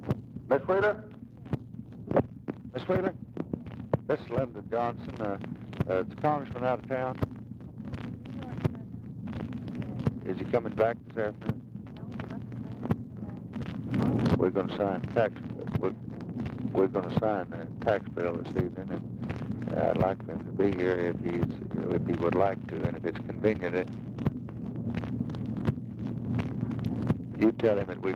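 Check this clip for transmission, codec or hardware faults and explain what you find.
No faults can be heard anywhere in this recording.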